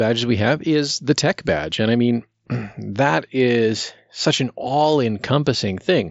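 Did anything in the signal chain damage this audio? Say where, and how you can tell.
No, nothing in the signal chain damaged this audio. It passes through a Bluetooth mSBC headset link, which accounts for the absence of content above about 7.7 kHz and a light coding texture consistent with that codec's roughly 61 kbps stream.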